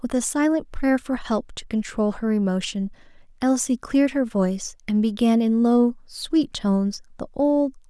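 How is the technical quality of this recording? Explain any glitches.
The technical quality of this recording holds up, with no glitches to explain.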